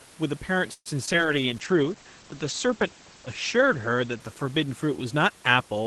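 At 0.73 to 0.88 s a call audio freeze stretches the speech by about 0.12 s, likely from delayed packets: a fading buzz, then 40 ms of flat silence in the waveform.

Short concealed packet loss follows at 1.06 to 1.09 s and 1.13 to 1.16 s. Each leaves a brief smear, with blurred harmonics on a spectrogram.

From 1.18 s to the end, a call bitrate drop takes Opus from 32 to 12 kbps for about 2.3 s at its lowest. The sound turns watery and muffled as the spectrogram's top edge falls from 12 kHz to 8 kHz.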